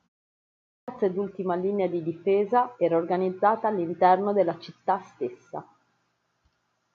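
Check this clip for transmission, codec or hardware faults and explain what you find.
One fault stands out: a clipped start after a pause at 0.53 s. After 0.53 s of silence the output path had gone idle and needed time to wake, so the first 0.35 s of speech, through 0.88 s, is swallowed and the sound enters abruptly without its onset.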